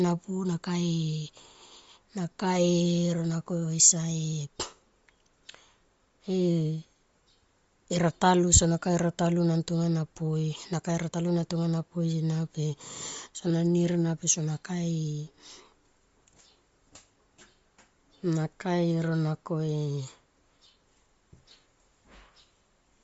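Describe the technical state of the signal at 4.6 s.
At 4.6 s the speech carries plainly audible codec damage lasting the whole clip, likely Bluetooth LC3 compression at a low bitrate, which fits about 32 kbps. Upper bands are coarsely quantised and noise-filled, giving a grainy, breathy edge. A spectrogram shows a hard ceiling at 7.6 kHz with smeared, speckled energy below it.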